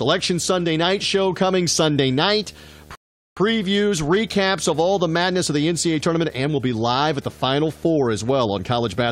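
A steady 75 Hz buzz with a fizzy hash above it runs through the whole of this speech recording, sitting at about 25 dB below the talker. That is video or display buzz, where a screen or video cable couples its field-rate pulses into the audio path. At 2.95 s the sound drops to silence and picks up again at 3.37 s exactly where it left off, adding about 0.41 s. This is a rebuffering stall: the player emptied its download buffer and waited for more data.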